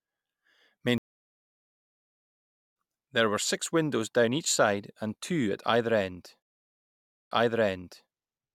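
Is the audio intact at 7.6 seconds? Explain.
No. From 6.42 s to 8.09 s the speech cuts out for 0.88 s, then picks up again about 0.79 s earlier than where it stopped, so by 7.6 s a stretch already heard is being replayed. This is a stream reconnect: the connection dropped, the player fell silent, and after reconnecting it began a fresh decoder mid-stream, with the server resending a backlog that rewinds the audio.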